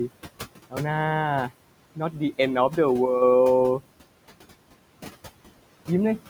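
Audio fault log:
throughout: noise suppressor artifacts. The background pumps, dropping away between phrases and swelling back under the speech. The suppressor is pulling noise-dominated bands down by about 18 dB frame by frame, tracking the room noise about 16 dB below the speech.
1.96–2.20 s: speech cut by the noise suppressor. A brief stretch of speech goes faint and swallowed, as though part of it slipped under the background. The suppressor mistook those low-level speech components for noise and turned them down with it, dipping as far as about 9 dB across roughly a tenth of a second in total.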